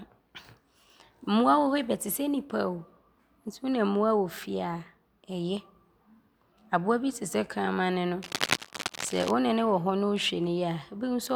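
From 8.23 s to 9.31 s, a burst of cable scratch noise runs for just over a second under the speech: a dense, irregular crackle and rustle sitting only a few decibels below the voice level. The likely cause is a worn cable, connector or control being moved, so its contact resistance jumps around rapidly and injects uneven noise into the signal path. It stops at 9.31 s.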